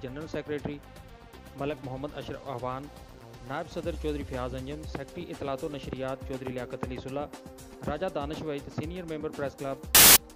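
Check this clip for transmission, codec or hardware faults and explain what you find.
A sudden burst of very loud white noise with hard edges, lasting about 0.21 s from 9.95 to 10.16 s, is a case of file tags played as audio. An embedded cover picture's compressed bytes were decoded as samples, and their near-random values come out as loud static.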